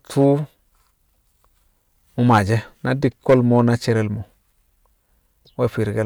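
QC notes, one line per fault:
0.20–0.27 s, 2.29–2.54 s and 3.05–3.68 s: hard clipping. Peaks exceed the stage's limit by about 1 dB, then about 6 dB and about 5 dB, and are cut flat. The flattened tops add high harmonics, heard as crackle on the first and harsh fuzz on the later two, ending before "na cerel mo̱".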